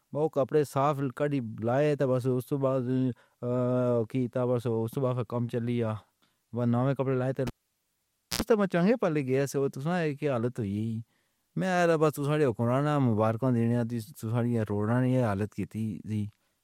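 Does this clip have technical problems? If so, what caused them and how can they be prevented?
Yes. Right after "بناؤے کپڑے لائے اتھے", from 7.47 to 8.42 s, the cable got pulled and plugged in: a pop, about 0.9 s of near silence, a 78 ms burst of 60 Hz mains buzz as the tip touched, then another pop before "تاں چانگھے پلک". Mute the channel before touching cables.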